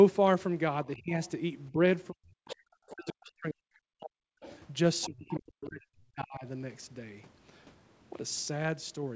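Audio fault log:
0.96–1.14 s, 1.7–4.35 s and 5.06–6.45 s, speech suppressed in double talk: the talker's level dips sharply, by roughly 25 dB in the first event and as much as 40 dB in the later two, and parts of the sound drop out in pieces. The likely cause is an echo canceller that could not separate the near talker from the loudspeaker echo and attenuated both. On the waveform these spans show collapsed envelopes. On the spectrogram the harmonics fade or gap.
1.24–1.3 s, 2.47–3.13 s and 4.4–5.4 s, other side's voice leaking through: a second, fainter voice sits under or between the talker's sound. It is a brief scrap at 1.24 s, roughly 30 dB down. It is stronger from 2.47 s, roughly 15 dB down, and about 20 dB down from 4.4 s. This is likely loudspeaker pickup that the echo canceller failed to remove. On the spectrogram a separate harmonic pattern appears.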